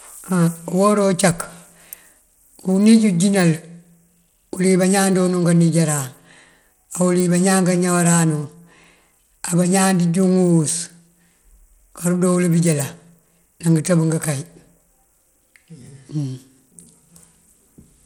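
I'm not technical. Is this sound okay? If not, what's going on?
No, not quite. All the way through, the speech has a gritty, crunchy edge, and the crisp top end, like the hiss of s sounds, thins out and flickers instead of staying steady. That points to Bluetooth SBC compression, the basic codec most wireless headsets and speakers fall back on, as the likely cause. It splits the sound into a few frequency bands and, when squeezed, starves the highest ones first, so fine detail wobbles and a grainy noise rides along.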